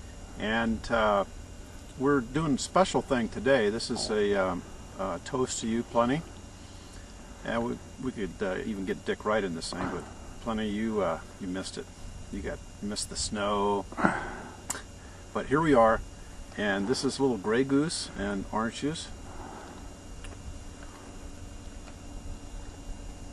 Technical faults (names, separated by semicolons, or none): none